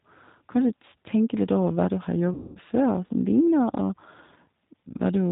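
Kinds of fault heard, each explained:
G.729 codec: the whole speech clip passes through a low-rate codec, which fits 8 kbit/s G.729, rebuilding the sound from a vocal tract filter and a few pulses, so nothing above 4 kHz remains and the voice sounds plainly rough and synthetic. Unlike simple band-limiting, the coarseness is in the voice itself, not just missing treble.
VoIP packet loss concealed by the speech codec: after "over hva du har", about 210 ms of sound went missing from 2.34 to 2.59 s. The decoder stretched its last pitch and filter into a buzzy tone or coloured noise that fades, and the voice stays weak briefly before "før som". A plain dropout would be silence instead.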